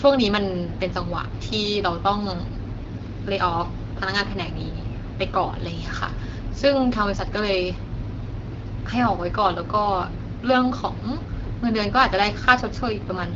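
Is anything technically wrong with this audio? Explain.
Yes, there's an AMR rate drop from 12.92 s to the end: the network throttles the codec for error protection, so speech gets rougher, more synthetic, fitting 12.65 down to 8.85 kbit/s.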